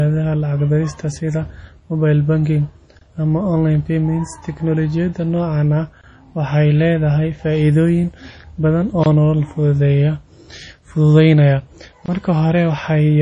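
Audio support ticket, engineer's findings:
Likely MP3 compression at low bitrate, consistent with about 32 kbps. Encoder starved of bits, dropping weak frequency lines frame to frame. Heavy codec damage throughout: watery, swirly texture on speech, smeared attacks. Treble cut at a fixed point, nothing above 10.5 kHz, so sibilants dull and chirpy.

Gap between chunks. Stream delivered in 3.0 s chunks with silence inserted at each join, from codec padding or a player starting each chunk late. Audible as a 23 ms hole at regular 3 s intervals. At 2.99 s, between "dirista sida mobile banking" and "ama online payments". At 6.01 s, after "noocaan ah", before "waxay leedahay faa’iidooyin badan". At 9.04 s, after "waxay leedahay faa’iidooyin badan". At 12.06 s. No audio lost, only interrupted.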